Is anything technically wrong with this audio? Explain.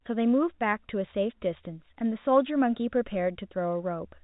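No, nothing here is technically wrong: the speech comes through a G.711 A-law telephone path working as designed, band-limited below 4 kHz with only the faint, level-following quantisation noise that coding always leaves.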